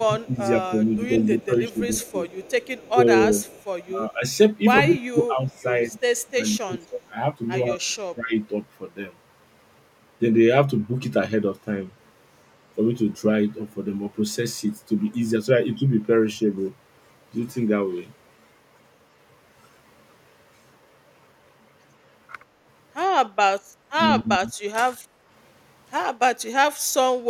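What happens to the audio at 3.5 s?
At 3.5 s the speech sits inside a stretch from 2.89 to 4.24 s where it is pulled down in level, by about 15 dB at its deepest, for roughly half a second in total. This is speech suppressed in double talk, likely an echo canceller attenuating the near talker while the far side was also speaking.

Overlapping this, from 3.44 to 3.64 s, a faint delayed copy of the voice appears about 150 ms behind the original and roughly 30 dB below it. This is echo leak, likely loudspeaker sound that the far end's echo canceller failed to remove and sent back.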